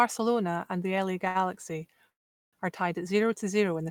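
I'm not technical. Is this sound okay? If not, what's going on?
No. Around 1.28 to 1.37 s, a data packet arrived late, so the receiver held the last sound for about 70 ms: a short stall from a late packet.

From 2.10 to 2.55 s the speech stops into near-silence for about 0.4 s, then resumes at "are tied at zero". This is a call audio freeze, likely from packets held up in transit.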